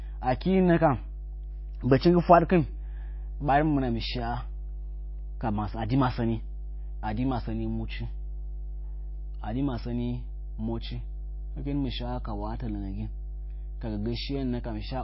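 A ground loop or nearby transformer has coupled the 50 Hz power line into this speech recording, leaving mains hum throughout: a steady low drone with some low harmonics, loud enough to sit only about 10 dB below the speech. The sound is also plainly damaged by what is likely MP3 compression at a starved bitrate, consistent with roughly 24 kbps. The encoder has cut everything above 5.6 kHz, dulling the treble, and its dropping of weak frequency lines from frame to frame gives a watery, swirly texture, with smeared consonant attacks.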